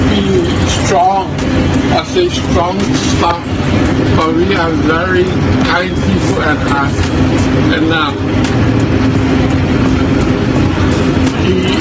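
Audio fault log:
Throughout, gain pumping: gain swings roughly 10 dB under loud sounds, likely mic gain far too high with a fast limiter clamping.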